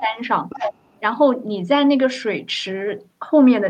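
From the very start to 0.19 s the talker's level sinks by about 10 dB, a sign of speech suppressed in double talk. This likely happened because the echo canceller heard the far side at the same moment and could not tell its own talker from the loudspeaker echo, so it pulled both down. On a waveform this opening fifth of a second looks pinched. On a spectrogram the talker's harmonics dim across that stretch.

Between 0.49 and 1.0 s a second voice sits under the talker, only about 5 dB quieter. This is the other side's voice leaking through, likely loudspeaker playback that the echo canceller failed to strip from the microphone signal. A spectrogram shows a second, independent set of harmonic traces crossing the talker's pattern. The waveform envelope turns denser and less regular across that half-second.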